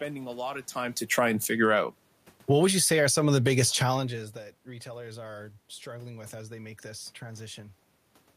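Automatic gain falling occurs twice in this speech. From 1.0 to 1.73 s the gain control pulls its gain down by about 6 dB. From 2.35 to 3.68 s it lowers it again, by about 8 dB. Each time the voice sinks gradually and the room noise behind it sinks in step, which sets these dips apart from the talker's own movement around half a second and four seconds in.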